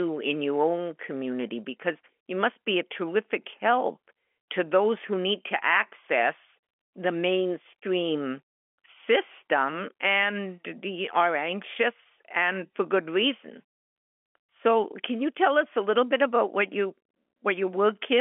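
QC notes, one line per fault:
No faults found.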